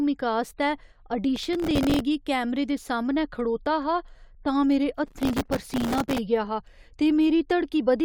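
Between 1.36 and 2.00 s, and again from 5.06 to 6.18 s, the speech carries processor overload crackle. Audio processing repeatedly failed to finish its very short buffers in time, each apparently only a millisecond or two long. Each miss replayed a scrap of stale audio with abrupt edges. The first stretch sounds like a few dozen misses. The second is longer and denser, more like a hundred or more, and produces a sustained gritty tearing before the load eases.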